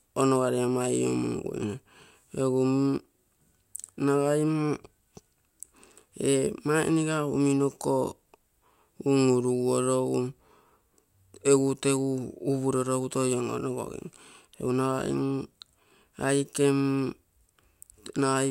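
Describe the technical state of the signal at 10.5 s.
At 10.5 s the speech signal is intact, with no audible fault at that moment.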